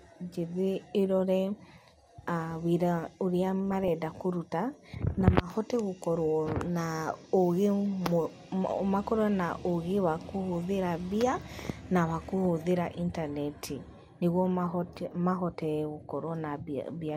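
At about 3.71 s the speech picks up a short patch of DAB burbling that lasts until roughly 3.88 s. It's the classic weak-reception sound: a few bit errors got past the error correction and corrupted the MP2 data, so individual sub-bands pick up short blips of noise. That gives a brief burst of noisy blips over the speech. The length points to around eight damaged frames, with a fairly low error rate behind it.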